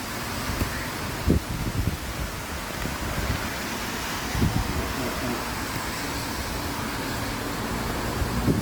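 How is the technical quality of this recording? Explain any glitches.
The technical quality is poor, with two faults heard throughout the whole recording of everyday sounds.

Throughout, quiet passages turn gritty and sputter, with distortion tracking the sound, likely from low bit depth without dither, truncated to about 5 bits.

Throughout, textures sound rough, grainy and noisy, though content reaches about 20.1 kHz, likely from Opus compression in music mode, fitting roughly 24 kbps.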